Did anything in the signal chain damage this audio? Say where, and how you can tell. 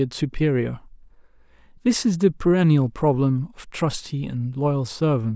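No, nothing in the signal chain has left any audible damage on this speech, and the signal holds together at every stage a listener can judge.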